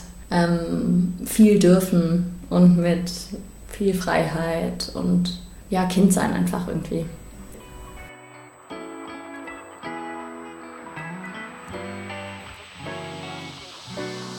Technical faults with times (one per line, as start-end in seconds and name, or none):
0.00-14.39 USB whine